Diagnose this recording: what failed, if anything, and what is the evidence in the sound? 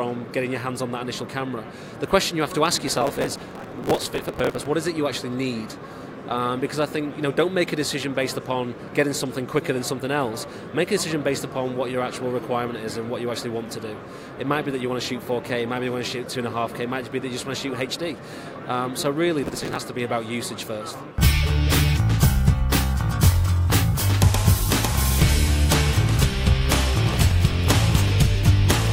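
Driver and buffer stage: there's processor overload crackle from 2.88 to 4.66 s, again at 19.43 to 19.79 s, and briefly at 27.07 to 27.31 s. The processor kept missing deadlines, skipping tiny chunks of audio. The hard-edged gaps pile up into gritty tearing. The grain fits a very small buffer, around a millisecond and a half.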